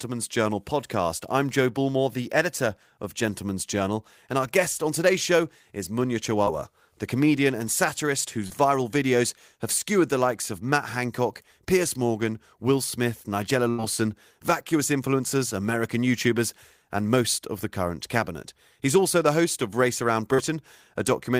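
At 6.43 s, just before "the comedian and satirist", and again at 8.47 s, between "the comedian and satirist" and "viral videos have skewered", there is short concealed packet loss. About 40 ms of audio failed to arrive in time, and the receiver extrapolated roughly 30 ms from the preceding sound before crossfading back, leaving a brief smear or wobble. At 13.70 s, ahead of "vacuous influencers", a burst of packet loss removes about 80 ms. The decoder stretches the last sound into a decaying buzz or hiss for about 84 ms, then jumps forward with that stretch missing. At 20.34 s a further short concealed packet loss of about 40 ms gives the same brief smear.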